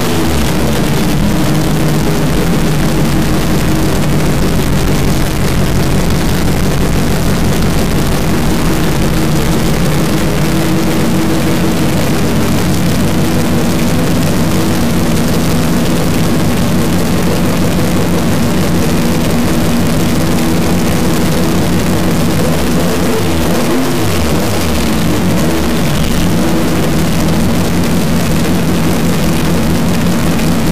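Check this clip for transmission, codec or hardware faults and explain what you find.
One hardware fault runs through the whole clip: a stuck bit. From start to finish the audio carries a harsh, buzzy distortion, and the quiet stretches are filled with noise instead of falling silent. The likely cause is a single data bit held at a fixed value by a broken line or converter. Every sample where that bit should differ lands off by the bit's weight, a step of roughly −10 dBFS. That is a high-order bit, which is why the error is so loud. Because small values near zero flip the bit as they cross sign, low-level passages turn into a strong noise floor.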